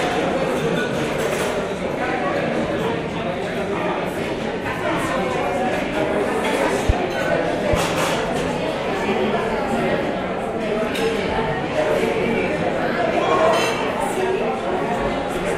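At 6.89 to 6.92 s a single loud pop cuts through the sound, peaking about 15 dB above the surrounding level. At 7.73 to 7.90 s a second loud pop event follows as two pops in quick succession, about 10 dB above the signal. The likely cause is a sudden voltage step or pulse, from a plug, a switch, static or a driver glitch, added to the signal. The underlying sound continues beneath both events.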